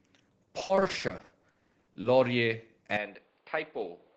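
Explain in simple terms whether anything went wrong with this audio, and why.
Two things go wrong. From 0.59 to 2.05 s there is repeated packet loss (robotic sound): the speech keeps dropping out in short holes, the longest about 60 ms, and each is patched by stretching the last bit of sound, so over a third of that stretch sounds choppy.

From 2.97 s to the end, the speech turns duller and a little quieter, with faint new background noise and nothing above about 4.9 kHz. There is no gap at the change. The likely cause is the input switched to a poorer device, such as a headset microphone.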